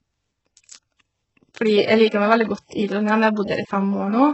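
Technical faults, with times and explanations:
Throughout, HE-AAC compression: the speech carries heavy codec damage, with nothing above 8 kHz and a treble band that sounds synthetic rather than captured. The likely cause is HE-AAC at a very low bitrate, fitting roughly 8 kbps, where only the lower spectrum is coded and the top is rebuilt by copying lower bands upward under a coarse envelope. Harmonics fail to align across that crossover, so sibilants turn gritty, metallic or lispy.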